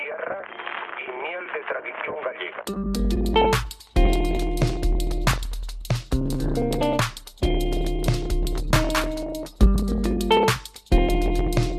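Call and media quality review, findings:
No faults found: the signal path shows no audible transmission, capture or playback impairment.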